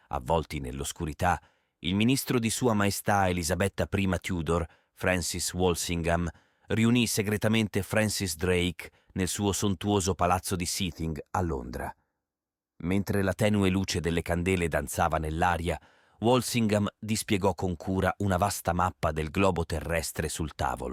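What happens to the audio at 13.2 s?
The sound turns hollow and phasey from 10.91 s, after "suo sontuoso palazzo di", to 13.31 s, before "tenue luce delle candele". This is channel delay (comb filtering): one channel lags by a fraction of a millisecond, so the mono sum cancels evenly spaced frequencies, the first notch near 3 kHz.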